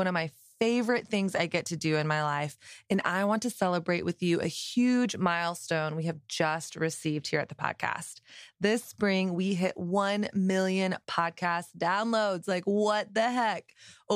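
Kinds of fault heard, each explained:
Nothing stood out on listening to this speech recording.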